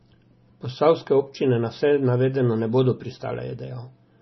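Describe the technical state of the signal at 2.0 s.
At 2.0 s the speech shows heavy compression damage, present throughout the clip. The likely cause is MP3 compression at a low bitrate, near 24 kbps. Nothing remains above 5.9 kHz. Weak frequency lines flicker between frames, giving a watery, swirly sound.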